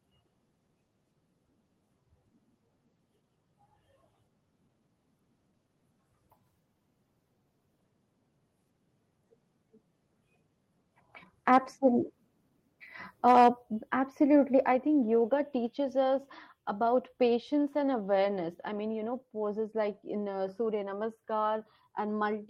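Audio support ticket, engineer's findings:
Harsh crackle on speech peaks, 11.53–11.57 s and 13.28–13.49 s, just before "absolutely I think yoga". Likely microphone overload: input gain too hot, peaks driven about 2 dB and about 4 dB past converter full scale, tops flattened on several percent of samples.

Abrupt level drops of about 4 dB in voice and background together at 13.62 s and 14.64 s, ahead of "absolutely I think yoga" and "I think yoga". Microphone volume stepped down, likely by the call client's gain control reacting to the clipped peaks and lowering device input in single steps.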